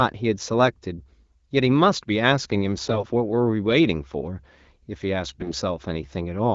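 From 2.85 to 3.03 s and again from 5.29 to 5.52 s, the speech turns hoarse and gargly. These are AMR bit errors. Corrupted bits in the less protected parts of the AMR-WB frames slipped past the checksum, so the excitation pulses and the fine pitch, gain and spectral values decode wrongly. Both bursts sound like a fairly high error rate of several percent. Pitch and loudness roughly hold, so the waveform envelope stays roughly the same. On a spectrogram, the harmonic striations blur into scratchy broadband texture within the codec's 7 kHz band.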